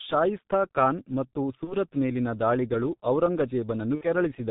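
Speech, passed through the G.723.1 codec. It sounds muffled and hoarse, with nothing above 4 kHz, here in the 6.3 kbit/s mode. VoIP packet loss concealed by the speech codec occurs at 1.64 to 1.74 s, between "ಶಾಯಿಸ್ತಾ ಖಾನ್ ಮತ್ತು" and "ಮೇಲಿನ ದಾಳಿಗಳು", and again at 3.95 to 4.06 s. The decoder stretches the last sound into a fading buzz or noise. The gaps fit one and two lost 30 ms frames.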